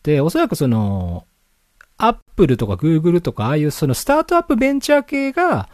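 Separately encoded pieces of the speech were joined without trimming the encoder's start-up delay and final-frame padding, leaving a gap at the join of encoded pieces. At 2.21 to 2.28 s, a 65 ms silence with smeared edges interrupts the speech before it resumes.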